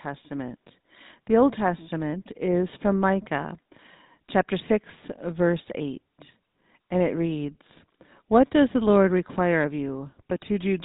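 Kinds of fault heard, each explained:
GSM full-rate codec: The speech has gone through the original GSM full-rate phone codec, which fits its 13 kbps rate. That codec rebuilds the voice from a vocal-tract model driven by a sparse, regularly spaced pulse train, and in this clip the damage is plainly audible as a buzzy, gravelly roughness over the speech throughout. The top end is gone too, with nothing coming through above about 3.8 kHz, so everything sounds narrow and phone-like.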